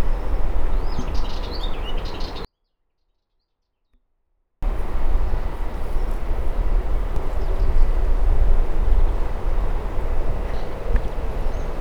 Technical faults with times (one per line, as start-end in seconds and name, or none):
2.45-4.63 24-bit alignment error (too quiet)